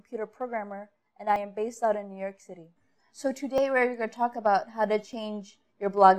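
Three brief skips break the sound at 1.36 s, 3.58 s and 5.13 s, each with a small jump forward and no gap of silence. The skips shrink over the clip, from a few tens of milliseconds at the first to roughly 10 ms at the last. The likely cause is a dropped buffer (overrun): the hardware overwrote samples before the software read them, so a short stretch was lost and the surrounding audio was spliced directly together.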